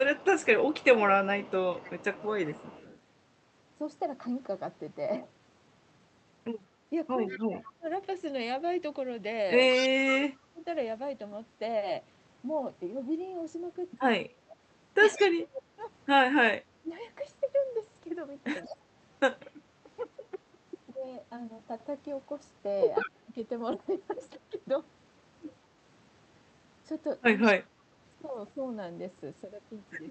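From 0.0 to 2.99 s a faint copy of the speech trails it by 178 ms, about 25 dB down. This is an echo leak, likely from a loudspeaker on the far end whose sound slipped past its echo canceller and was sent back.

Between 0.57 and 1.99 s the speech dips by around 15 dB in short pieces, roughly half a second in all. This is speech suppressed in double talk: with both sides talking at once, the canceller likely turned everything down because it could not tell the talker from the echo.

From 7.26 to 9.88 s the echo returns louder, about 15 dB below the speech. Overlapping it, from 7.3 to 10.66 s, the talker drops by up to around 30 dB for some one and a half seconds in total.

Across 14.26 to 24.64 s suppression chops the speech again, by as much as around 25 dB and for about one and a half seconds altogether. Within that stretch brief echo scraps surface at 15.16 to 15.26 s, 18.64 to 18.68 s and 22.99 to 23.1 s, about 20, 30 and 10 dB below the speech respectively.

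The final stretch, 28.55 to 30.1 s, dips by around 10 dB.

Throughout, the Opus call path cuts off the high end above 8 kHz.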